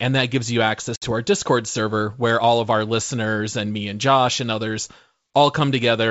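A hard-edged silent hole opens at 0.96 s, right after "that gives you", and lasts to 1.05 s; with "to our" the speech returns with brief distortion. This is packet loss on an ADPCM call: about 60 ms, a few packets, went missing on the G.722 wideband link, and the decoder's predictor and step size lost step with the sender's before settling.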